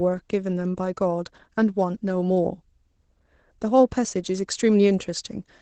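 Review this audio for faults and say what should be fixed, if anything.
Opus voice compression runs throughout the speech. It sounds muffled and slightly hoarse and robotic, with nothing above about 8 kHz, which fits a low bitrate around 12 kbps coding speech with SILK linear prediction and coarse excitation. Prevent this by encoding at a higher Opus bitrate or keeping an uncompressed source.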